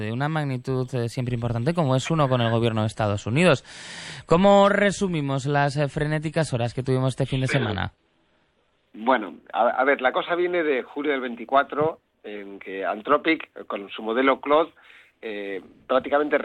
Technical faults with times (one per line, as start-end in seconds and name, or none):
2.86-8.86 adaptive stream at a lower bitrate